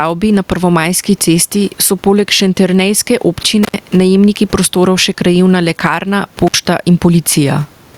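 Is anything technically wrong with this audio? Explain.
Yes. Throughout the speech there is gain pumping: loud and soft parts are pulled closer in level and the sound is squashed, a swing of around 10 dB. The likely cause is excessive input gain with a fast limiter clamping down on peaks. Unlike steady room noise, which sits about 38 dB below the speech here, this level change follows the speech.

There is also an intermittent contact at 3.63 to 3.74 s and again at 6.47 to 6.55 s. A loose connection opens for about 89 ms and then 58 ms. The sound drops out with crackle at both edges and faint hiss in between. The crackle and residual hiss distinguish it from a clean digital dropout.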